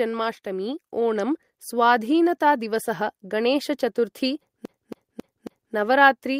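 From 0.43 to 1.58 s there's automatic gain rising: the gain control decided the speech was too quiet and eased everything up by about 4 dB, background included. Then at 4.65 s it turns into a CD stuck on one turn, with a scratch-style skip replaying the same 0.27 s chunk four times, each jump marked by a tiny mute, until 5.74 s.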